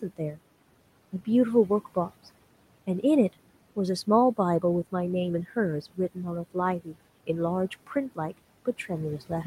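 Right from the start there are noise suppressor artifacts: the room noise, sitting about 19 dB under the speech, gets pulled down by about 18 dB in the gaps and comes back up underneath the talking, leaving a pumping texture in the background.

The suppressor also mistakes bits of speech for noise and cuts them. It happens from 0.02 to 0.39 s and again from 6.8 to 6.96 s, dipping by up to about 16 dB over a short stretch each time, so those sounds come out swallowed and faint.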